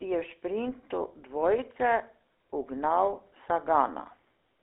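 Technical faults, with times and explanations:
throughout, GSM full-rate codec: The speech sits in a narrow telephone band, from about 300 Hz up to about 3.6 kHz, with nothing above. It carries a plainly audible buzzy, gravelly roughness, which fits a 13 kbps GSM full-rate coder. That coder reduces the voice to a vocal-tract filter driven by a sparse, regularly spaced pulse excitation, so the fine detail of the original signal is replaced by a coarse, rasping texture.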